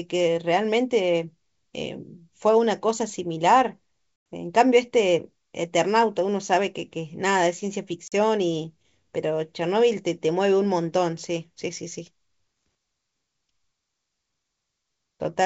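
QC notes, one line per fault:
4.33 s and 8.08–8.13 s, packet loss on an ADPCM call: the speech drops to hard-edged silence for 100 ms at 4.33 s and for 40 ms at 8.08 s, which fits roughly five and two lost packets. The decoder's adaptive predictor and step size lose track of the sender's, so each restart comes back with brief, slight distortion before settling. On the waveform, flat gaps with sheer edges. On the spectrogram, blank vertical bands within the wideband G.722 speech.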